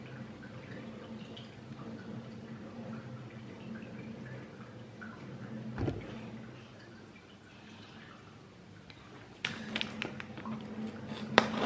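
No technical faults can be heard in this audio.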